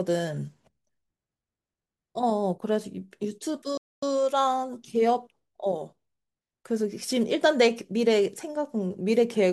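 At 3.77 s the speech cuts out abruptly and stays silent for about 250 ms, resuming at 4.03 s. This is a playback stall: the player likely ran short of data or had its thread blocked, so output halted until it recovered.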